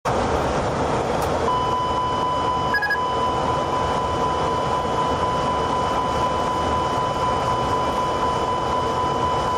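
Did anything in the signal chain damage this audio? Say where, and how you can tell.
Yes. Gain pumping runs throughout: the gain ducks by roughly 5 dB under each loud sound and recovers in the gaps, likely excessive input gain driving a fast limiter, unlike steady noise gating.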